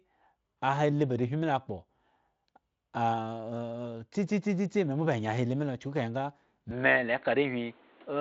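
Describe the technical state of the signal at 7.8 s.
At 7.8 s the speech sits inside a stretch running from 6.71 s to the end where the likely cause is an input switched to a poorer device. The band, which reached about 7.6 kHz through the Speex path, now stops near 4.3 kHz, so the sound turns dull and boxy, with new background noise roughly 30 dB below the speech. On a spectrogram the upper band vanishes abruptly at 6.71 s and pauses show a raised noise floor. The waveform shows no gap and no obvious level change.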